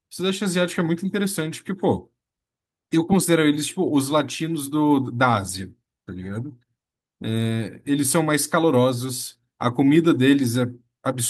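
No technical faults are audible anywhere in the recording.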